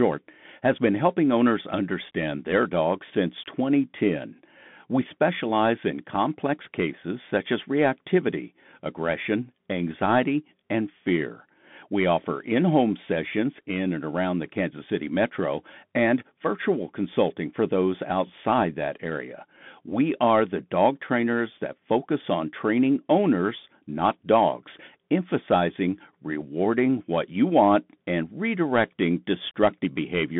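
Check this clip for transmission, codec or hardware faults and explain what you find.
One fault runs through the whole speech clip: a Bluetooth CVSD headset codec. Throughout, the speech sounds thin and boxed-in, with scratchy s sounds and a granular hiss beneath. CVSD sends one up-or-down bit per sample, which fits a 64 kbps stream, and its adaptive step lags on sharp sounds. The 150 Hz to 3.5 kHz band leaves nothing above 3.8 kHz.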